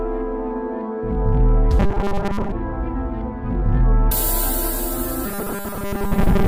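A rigid, metallic buzz fixed near 200 Hz is heard from 1.80 to 2.53 s and again from 5.26 s to the end, most likely robotic sound from repeated short buffers, with roughly 5 ms chunks looped in place of much of the real signal.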